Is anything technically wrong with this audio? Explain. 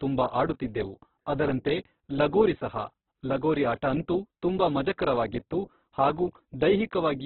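Yes. Across the whole clip the speech is band-limited and grainy, with nothing above about 4.4 kHz, and the damage is heavy. This is likely Opus compression. Starved of bits, the encoder keeps the rough energy in each band but refills the detail by folding lower bands upward or injecting noise, so the voice turns rough and gritty rather than swirly. The narrow bandwidth and coarse texture point to a very low bitrate, around 8 kbps in its music (CELT) mode.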